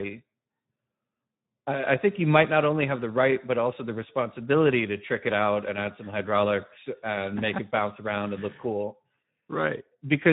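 Speex codec damage runs throughout this speech clip: starved CELP excitation leaves it noisy and hoarse, with a degradation level that fits a setting around 11 kbps.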